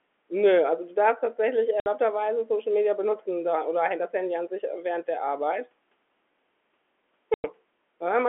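At 1.8 s, just after "also du darfst tatsächlich", the speech drops out for 60 ms. This is packet loss filled with silence. Audio packets went missing, and the receiver played nothing in their place. The gap fits three 20 ms packets. Its edges are hard. A longer hole follows at 7.34 s, lasting 100 ms, which fits five packets. Both gaps sit inside the narrow telephone band of the G.711 line.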